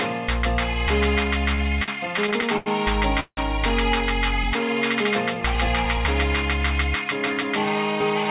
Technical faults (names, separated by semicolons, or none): repeated stalls (stutter); call audio freeze